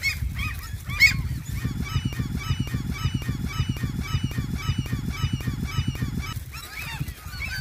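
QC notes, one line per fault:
2.13–6.33 s, broken-record loop: a 0.55 s fragment repeats exactly, back to back, 8 times, replacing the audio meant for that span, likely a stalled player or stream resending its last buffer. Waveform and spectrogram show identical blocks tiling at 0.55 s intervals.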